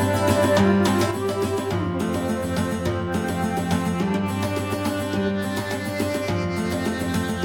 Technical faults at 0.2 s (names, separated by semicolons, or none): none